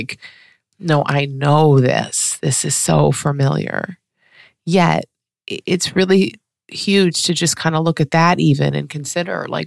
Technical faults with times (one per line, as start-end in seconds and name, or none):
none